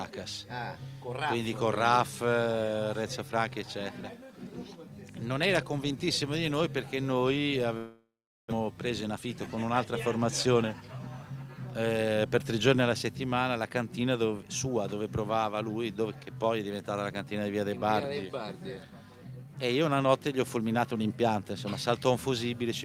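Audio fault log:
7.77–8.52 s, long network dropout: the last sound is stretched into a fading buzz, then about 0.41 s of silence, and the audio resumes with about 0.4 s gone. The likely cause is a stall in incoming packets. Unlike a brief packet-loss glitch, the concealment gives up and leaves a real gap.
8.60–11.07 s, jitter buffer speed-up: the audio runs at 112% speed with its pitch unchanged. Roughly 0.3 s of delay built up at the dropout is trimmed away through many tiny pitch-period cuts. Resampled playback would raise the pitch instead, so the steady pitch points to the jitter buffer.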